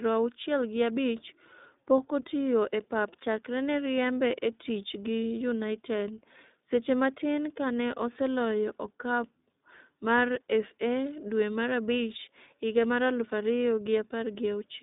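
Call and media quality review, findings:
iLBC codec, throughout. Speech narrowband, thin and slightly rough, synthetic, plainly audible coding damage. Each 20 ms frame coded on its own, so texture grainy. Passband about 200 Hz to 3.7 kHz. Spectrogram: hard ceiling near 3.8 kHz, empty above. Artefacts fit iLBC at 15.2 kbps.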